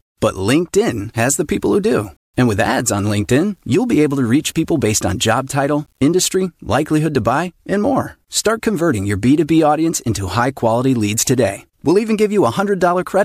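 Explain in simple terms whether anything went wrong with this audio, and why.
Between 1.02 and 6.08 s, just before "likelihood to buy and", the speech was likely stored with too few levels of loudness and rounded off without dither, which fits about 9 bits. This low bit depth without dither gives the quieter parts a gritty, grainy edge that shifts as the voice moves.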